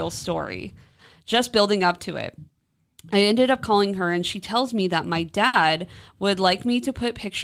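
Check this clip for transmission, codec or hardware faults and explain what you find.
One fault: a burst of packet loss at 5.47–5.56 s. Lost packets were concealed by extending and fading the last sound for 60 ms, heard as a brief held buzz if that sound was voiced or a fading hiss otherwise, shown as smeared, decaying energy before speech abruptly resumes.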